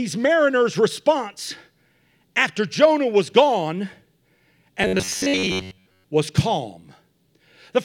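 From 4.83 to 6.04 s, before "was calm", robotic sound from repeated short buffers: a rigid 93.8 Hz metallic buzz, likely a looping 10.7 ms chunk replacing most of the speech.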